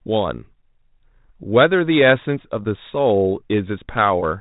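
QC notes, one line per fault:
No faults found in this speech clip. It carries G.726 ADPCM coding at 32 kbit/s, which holds the sound inside the telephone band with nothing above 4 kHz and leaves only light coding noise.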